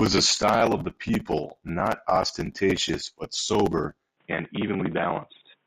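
At 4.17 s, right after "not ostentatious but sober," the input likely switched to a poorer device, and the rest of the speech comes through it. That input passes nothing above 3.8 kHz, so the voice abruptly turns dull and boxy, losing its sibilance and air. The change is seamless, with no gap at the switch and the level staying about the same, and a faint new background noise sits well beneath the speech.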